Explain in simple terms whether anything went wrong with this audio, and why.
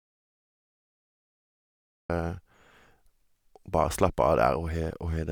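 Yes, something went wrong: the audio input was lost at the start, most likely from a disconnected device, a failed link or a mute left on, while recording carried on. That is an audio dropout to silence. The clip opens in total silence, with no room sound at all, until speech cuts in at 2.1 seconds.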